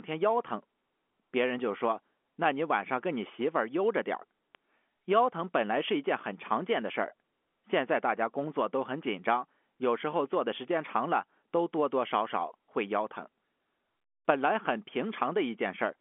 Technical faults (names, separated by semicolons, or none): bit error spike